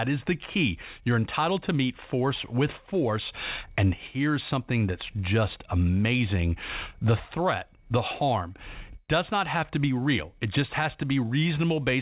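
Nothing stood out on listening, and the speech carries the narrow, telephone-like band of a G.711 call path, with nothing above 4 kHz.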